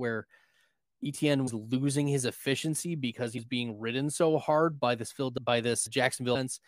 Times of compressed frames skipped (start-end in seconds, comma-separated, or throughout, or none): 1.46-1.48, 3.37, 6.34